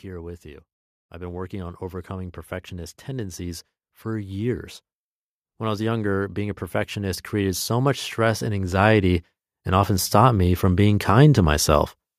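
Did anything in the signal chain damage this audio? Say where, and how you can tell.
Yes: automatic gain rising, from 0.05 to 4.66 s (about 8 dB) and again from 5.58 to 11.94 s (about 13 dB), in the call-processing stage. Speech and background swell together slowly, showing an AGC judging the input too quiet and ramping its gain upward.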